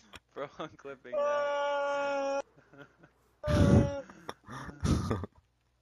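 No technical faults can be heard anywhere in this audio.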